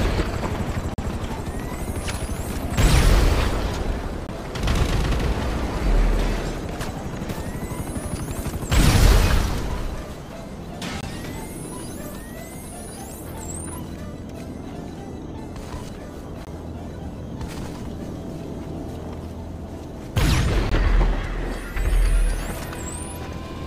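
Output buffers likely went unfilled five times, leaving blocks of digital silence: 43 ms at 0.94 s, then 21 ms at 4.27, 11.01, 16.45 and 20.69 s, fitting 2048- and 1024-sample buffers. Each abrupt cut to silence and back is heard as a brief hole.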